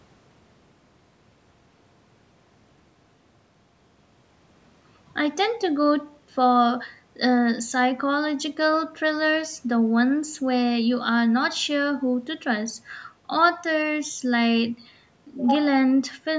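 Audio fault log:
Nothing wrong turns up in this speech, just the ordinary call microphone processing, with the top end stopping around 8 kHz and the deepest bass trimmed away as you'd expect from a call.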